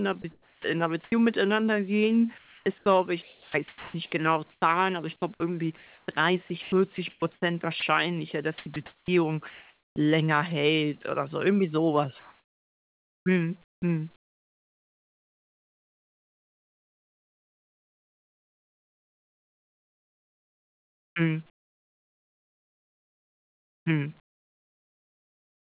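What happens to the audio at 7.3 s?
Between 6.62 and 7.82 s the speech is chopped, likely by the sender's voice detector switching transmission on and off repeatedly. About 340 ms of quiet syllables and word edges are replaced by comfort noise, so the sound stutters.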